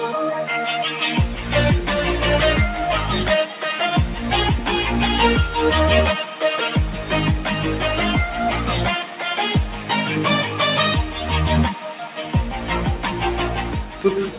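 A noise suppressor built for speech was left running on this non-speech audio, so it keeps treating steady tones and decaying tails as noise to be removed. The result is a noise suppressor applied to music or sounds: held material and reverberant tails are pulled down while onsets pass almost intact. The level swings by around 5 dB, which makes the sound pump and flutter and leaves sustained passages thinner than their attacks. On five occasions the suppressor went further and clamped individual sustained or fading moments, heard as sound cut by the noise suppressor. Each one drops by about 6 dB: briefly at 3.47 to 3.63 s, 6.25 to 6.42 s and 9.04 to 9.22 s, for more than half a second at 11.74 to 12.34 s, and for roughly a third of a second at 13.61 to 13.98 s. In each case the decay sags or ends early instead of fading naturally. Underneath this, the call path sounds like G.711 mu-law at 64 kbps, with nothing above 4 kHz.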